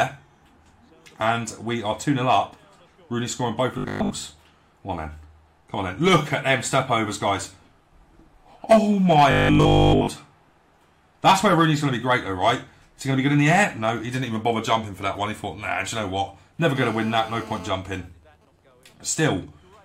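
From 3.78 to 4.12 s and again from 9.31 to 10.09 s, new audio likely arrived too late to fill the output, so the playback repeated its last 20 ms segment in place of fresh material. Across most of the first stretch and practically all of the second, this robotic sound from repeated short buffers forces a 50 Hz periodicity onto the sound. It becomes a rigid, metallic buzz at that pitch that only loosely tracks the underlying audio.

From 16.76 to 17.68 s, a 2G phone nearby in an active call transmits radio bursts 217 times a second, and the audio circuitry rectifies those pulses into the signal path. The result is GSM phone buzz: a hard, raspy 217 Hz tone with a dense stack of harmonics, sitting about 18 dB below the signal and having no relation to the sound it overlays.

From 17.75 to 19.08 s, the same phone, still in the call but with its user silent, sends only sparse groups of bursts. 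The circuitry demodulates these as well, producing GSM signalling bursts. They are heard as even ticks with a longer 217 Hz buzz twice a second, much fainter than the preceding buzz at roughly 35 dB below the signal.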